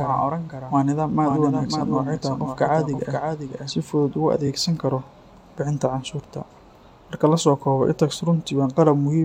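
Doubled audio track runs through the opening of this speech recording, already under way when it begins and stopping abruptly at 3.70 s. A full-band second copy trails the original by roughly half a second at about 5 dB lower, with no decay or room colour. It sounds like a dry, detached echo rather than reverberation, most likely from the same signal being mixed in again through a slower capture path or from two copies left out of step in an edit. Repeated frames cause a brief stutter twice, from 1.30 to 1.33 s and from 4.46 to 4.48 s, the second just before "karo bixinta". Each time the same 23.2 ms block plays one extra time, which fits a single compressed frame being written or sent twice. The decoder replays that slice, and each repeat lengthens the clip by 23.2 ms.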